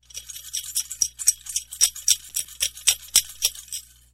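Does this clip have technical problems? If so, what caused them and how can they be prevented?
Yes. From 2.20 to 2.46 s a gritty burst of crackle tears across the sound. This is processor overload crackle: the processor missed over a dozen deadlines again and again over a short stretch on short buffers of a few milliseconds, and each miss left a hard-edged gap of silence. Reducing processing load or using larger buffers prevents it.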